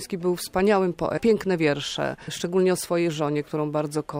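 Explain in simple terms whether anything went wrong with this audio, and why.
Two problems occur. At 1.17 to 1.19 s there is a skip ahead: about 0.7 s of audio was dropped, so playback jumps forward with no gap. From 1.27 to 3.36 s a jitter buffer speed-up trims tiny slices, roughly 0.15 s in total, so the sound runs at 108% speed without changing pitch.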